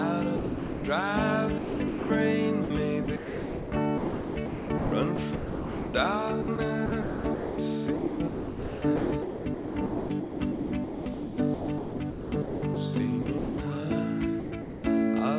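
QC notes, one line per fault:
0.36–0.84 s, sound dropped by the voice detector: The sound stops for about 480 ms. Steady synthetic noise fills the gap. The likely cause is the sender's voice detector judging this stretch to be background. It stopped sending, and the receiver substituted comfort noise until sending resumed.
1.58–2.1 s, 2.64–13.58 s and 14.4–14.84 s, sound chopped by the voice detector: The sound keeps breaking up. The long middle stretch loses about 6.2 s in total. The likely cause is the voice detector switching sending on and off repeatedly, with comfort noise filling each gap. The band stops at 4 kHz, which fits a G.711 call codec.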